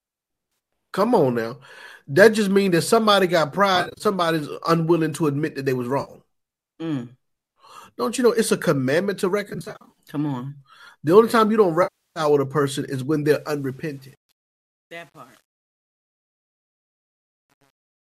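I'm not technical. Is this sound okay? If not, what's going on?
No, there are two kinds of problem.

The first is AAC frame loss with concealment. Small chunks of the stream went missing, and the player papered over each gap by guessing from the last good moment of sound. That leaves brief smeared, noisy or hollow-sounding patches at 0.52 to 0.59 s, 3.76 to 4.04 s (just after "means that somebody got"), 6.01 to 6.11 s, 9.50 to 9.98 s (just after "it's a commandment to"), and 11.83 to 12.20 s. The one at 11.83 s is a solid third of a second. The two after the quoted phrases are several short dropouts scattered across the stretch.

The second is truncation distortion on a fade. The ending fades out from about 13.3 s. But the volume change was done with too little precision, about 9 bits, and with no smoothing noise added to hide the steps. So from 13.27 s, right after "a person is when", the quiet tail gets grainy. 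From about 14.1 s to the end it turns gritty instead of sinking cleanly into silence.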